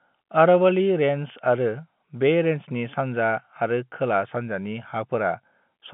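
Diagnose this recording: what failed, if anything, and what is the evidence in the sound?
Nothing failed; the telephone-band speech sounds intact throughout.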